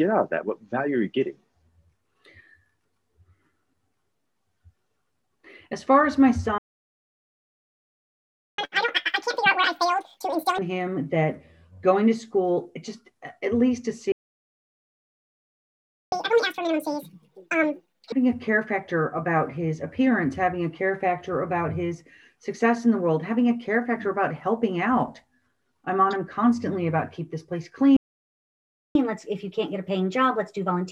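At 6.58 s the sound cuts out for 2 s, a playback stall. The player likely ran dry or was blocked. At 8.58 s it resumes in a catch-up at higher speed: 2x for 2 s, pitch nearly an octave up, racing through the backlog.

The same pair repeats. Silence runs from 14.12 to 16.12 s. Doubled speed and raised pitch follow until 18.12 s.

A shorter stall, about 1 s, starts at 27.96 s. From 28.95 s the sound runs 1.15x fast, roughly two semitones sharp, to the end.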